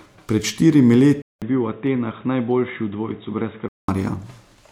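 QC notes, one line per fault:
1.22 to 3.88 s, input switched to a poorer device: after a 200 ms gap the speech turns dull and boxy, with nothing above 3.8 kHz, a drop of about 5 dB in level, and a new background noise sitting about 30 dB below the speech. This likely comes from the recording switching to a lesser microphone or a headset's call profile, whose narrow band and own noise hold until the full sound returns at 3.88 s.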